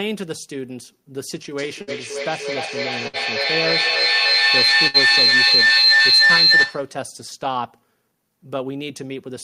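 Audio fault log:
1.58–7.05 s, feedback howl: the microphone-to-loudspeaker loop gains level on every trip, building a tone near 4 kHz that pulses roughly every 0.3 s. It peaks about 12 dB above speech and shows as a bright horizontal band on a spectrogram.
1.81–1.90 s, 3.07–3.16 s, 4.87–4.97 s, burst of packet loss: each time about 60 ms of sound goes missing. The last sound is held and fades over roughly 60 ms, then the speech jumps ahead. A waveform shows a repeating, decaying stretch, and a spectrogram shows smeared flat bands before a hard edge.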